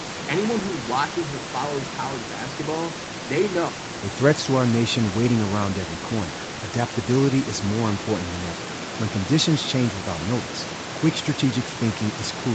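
Listening to this speech recording, nothing technically wrong stood out.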